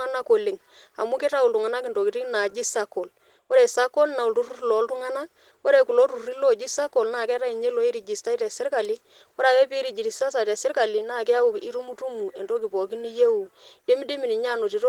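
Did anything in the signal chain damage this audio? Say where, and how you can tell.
Yes. Opus voice compression at the codec stage runs throughout the speech: it sounds hoarse and slightly robotic. The low band is coded by linear prediction with coarse excitation, and a thin transform layer sits above 8 kHz, which fits roughly 16 kbps.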